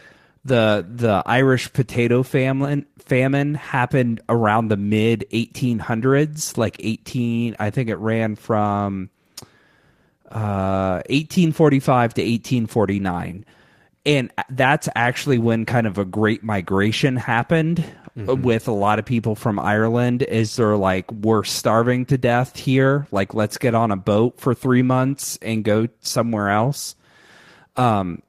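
At 0.51, 11.21, 15.33 and 25.77 s, a lost packet is rebuilt from error correction. A lower-quality copy fills each 20 ms slot, so the waveform is continuous but a brief rough, noisy smear shows on the spectrogram.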